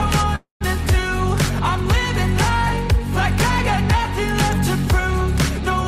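Packets were likely held up in transit, draining the jitter buffer and causing a call audio freeze from 0.35 to 0.63 s. The receiver stretches the last sound into a fading buzz, then about 140 ms of silence, before resuming where it stopped, roughly a quarter-second late.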